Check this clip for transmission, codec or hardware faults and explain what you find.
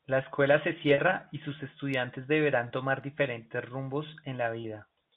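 Three short dropouts bridged by packet loss with pitch repetition occur under the narrowband telephone band of G.711 coding, which cuts everything above 4 kHz. At 0.94 s, after "escuela se", about 40 ms is missing, which fits two lost 20 ms packets. Single-packet gaps of about 20 ms follow at 2.68 s, before "tomar diferentes rumbos", and at 4.62 s, after that phrase. The receiver loops the last pitch period, so each gap sounds like a brief buzzy hold. On a spectrogram this shows as frozen, evenly spaced harmonics, and the waveform shows one cycle repeated as it fades.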